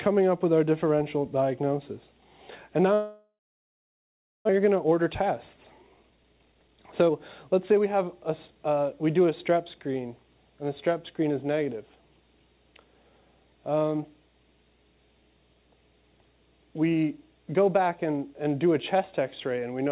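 From 2.94 to 4.51 s the stream stops arriving, most likely a long network dropout. The receiver stretches the last sound into a brief fading buzz or hiss, then leaves about 1.1 s of silence. When audio resumes, roughly a second of material is simply gone, and the delay has jumped by about half a second because the late packets have piled up in the buffer.

To work off that backlog, the receiver applies jitter buffer speed-up, cutting out short pitch-period slices again and again. From 4.59 to 7.10 s the audio plays at 116% speed, shedding about 0.4 s, and from 7.50 to 8.74 s a milder 107% removes about 0.1 s more. The pitch stays the same, but both stretches sound noticeably hurried.

Throughout the clip nothing is heard above 4 kHz, which fits a narrowband G.711 call codec.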